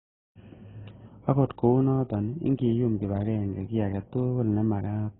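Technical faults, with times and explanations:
Throughout, transcoding between lossy codecs: muffled speech, nothing above 3.8 kHz, and two layers of different codec artefacts heard together, likely from a low-bitrate AAC encode re-encoded as Opus.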